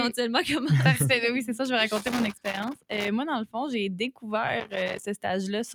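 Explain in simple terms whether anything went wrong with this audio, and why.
Two things went wrong here. First, a noise suppressor made for speech was left running on music or sounds. It treats held tones and lingering tails as noise and keeps nudging them down a little, so the sound gently pumps and thins out from start to finish.

Second, there's loose connector crackle from about 1.96 to 3.08 seconds and again from 4.60 to 5.04 seconds. A worn or dirty contact keeps cutting in and out, chopping the signal into bursts of scratchy crackling.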